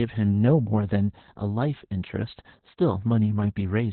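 Opus voice compression runs throughout: the SILK coder squeezes the speech into narrowband with nothing above 4.2 kHz, sounding muffled, hoarse and robotic, which fits roughly 8 kbps.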